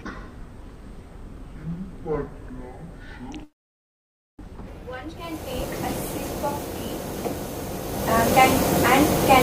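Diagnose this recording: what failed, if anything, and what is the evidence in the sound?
The opening section, from 0.0 to 4.68 s, plays at the wrong speed. It runs at 0.523 times normal rate, so it is slower and pitched about ten semitones low. Speed and pitch drop together, which points to a resampling or clock mismatch rather than a pitch effect. The stage is likely playback or editing, where this stretch was fitted to the wrong sample clock. After 4.68 s the sound returns to its proper rate and pitch.

A call audio freeze sits inside that slowed section, from 3.43 to 4.42 s. The sound stops and a brief tail fades out. Roughly 0.92 s of near silence follows. In total about 0.95 s of fill is inserted. Nothing is lost. The audio resumes exactly where it paused, so the stream is delayed by the same 0.95 s. The likely cause is network packets arriving late and the call's jitter buffer running dry.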